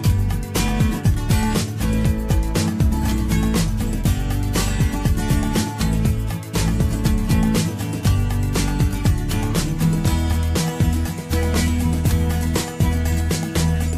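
No technical faults can be heard anywhere in the clip.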